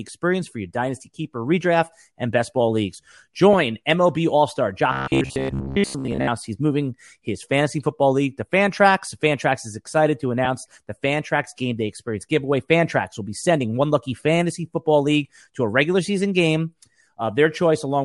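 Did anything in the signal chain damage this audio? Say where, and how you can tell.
Yes. Throughout the speech there is a breathy, grainy edge on the upper band, with noise-like fill where high-frequency detail should be. This is the codec stage, likely Bluetooth LC3 compression, and the damage is plainly audible. The texture fits a transform codec working in 10 ms frames at a moderate bitrate, around 48 kbps. Because it is constant rather than tied to moments, it can't be network loss or a buffer fault.

Lost LE Audio frames appear at 3.53 s and again from 10.45 to 10.47 s. Each is a brief noisy smear lasting about 10 ms, which fits a single missing frame. The LC3 decoder fills the hole by reusing the previous spectrum with randomised signs. These are network or radio-link dropouts. Unlike the buffer fault below, they produce no pitched buzz, and they are too short to fade into silence.

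Robotic sound from repeated short buffers runs from 4.93 to 6.29 s. The speech turns into a rigid metallic buzz at 66.8 Hz that still roughly follows the phrasing. That is likely the sign of a driver or buffer underrun: a segment of about 15 ms is replayed over and over while real audio is skipped, and most of the audio in this stretch is lost this way. The fixed pitch, set by the repeat length, distinguishes it from the unpitched smear of frame concealment.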